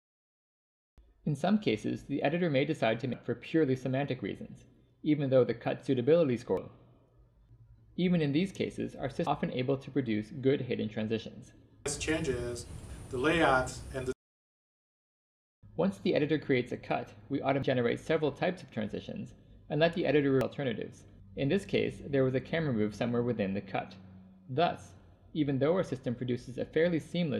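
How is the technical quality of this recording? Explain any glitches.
The recording is marred by five brief glitches, at 3.14, 6.57, 9.27, 17.63 and 20.41 seconds. Each is a brief disturbance that cuts across the audio for an instant. They come from damaged data in a compressed stream: at those points some of the encoded bytes were lost or corrupted, so the decoder could not read the affected frames properly. It lost sync and then searched ahead for the next valid frame header before playback resumed.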